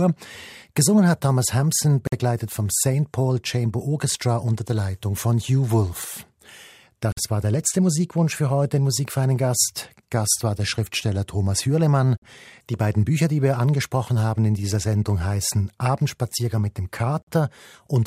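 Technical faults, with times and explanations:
2.07–2.12 s, 7.12–7.17 s, 12.17–12.22 s and 17.22–17.27 s, gap between chunks: the speech drops to dead silence for 50 ms with abrupt edges, once just before "war der letzte" and once right after "mit dem". The holes recur every 5.05 s, which fits audio delivered in 5-second chunks with a short stretch of silence inserted at each join, from padding or late playback of the next chunk. Nothing is removed; the speech simply pauses and resumes.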